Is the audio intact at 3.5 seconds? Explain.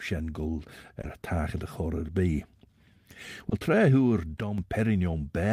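No, a brief smear or wobble from 3.49 to 3.53 s is short concealed packet loss: 20 ms never arrived, and the receiver filled it from the preceding sound.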